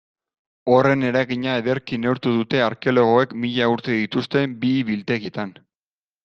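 At 5.25 s the speech jumps ahead: compressed frames skipped, roughly three 20 ms frames, about 70 ms lost.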